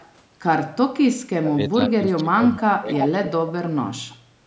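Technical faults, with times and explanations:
0.0–0.12 s, 2.93–2.97 s, 3.25–3.31 s and 4.11–4.16 s, echo leak: short, faint repeats of the far side's sound trail in behind the main signal. The first sits about 30 dB down at a 336 ms lag. The later three lag by 307 ms and range from about 35 dB down to about 15 dB down, loudest at 3.25 s. This is likely a loudspeaker-side echo canceller letting residual pickup through.
1.3–3.3 s and 4.06–4.1 s, speech suppressed in double talk: the level dips in patches while both sides are active. The first span loses roughly one and a half seconds in pieces, sinking by about 25 dB at worst. The second is a 40 ms dip of about 10 dB. This is likely an echo canceller that mistook the overlap for echo and ducked the near talker along with it.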